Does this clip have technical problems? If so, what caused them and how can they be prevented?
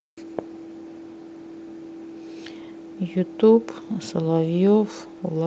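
No, nothing in this speech recording points to a technical fault, so there is no cause to trace and nothing to prevent.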